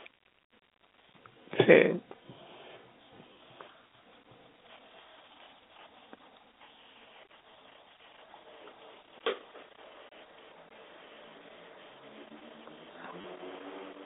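Packet loss with last packet repeated hits at 3.33–3.35 s and 13.21–13.24 s, filling 20 ms and 30 ms gaps by replaying the previous packet, which suggests 10 ms packets. The repeats break the pitch cycle, so each one sounds like a brief robotic stutter.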